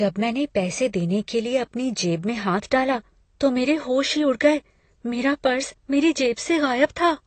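Speech, and the whole thing carries plainly audible AAC compression damage, likely from AAC-LC running at a low bitrate, something around 32 kbps. There's nothing above about 8.5 kHz, so it sounds dull and closed-in. The encoder is quantising the spectrum hard against its hearing model, which leaves gaps or substitute noise and smearing in the upper bands. You get that fizzy, warbling edge on sibilants and sustained sounds from start to finish.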